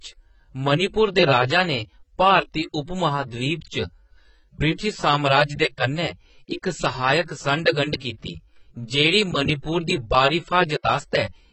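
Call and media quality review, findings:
Low-bitrate audio saved at a high bitrate, throughout: likely an earlier low-bitrate encode (sound fits a 16 kbit/s class AAC stage) re-wrapped as high-bitrate MP3. Nothing above 8.1 kHz; speech dull, sibilants blunted. Second encode cannot restore the removed band or artefacts.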